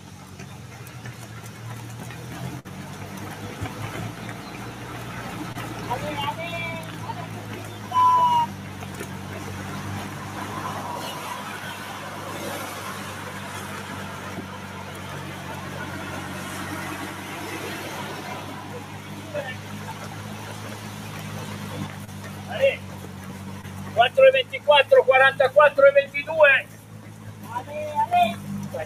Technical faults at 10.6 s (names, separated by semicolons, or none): noise suppressor applied to music or sounds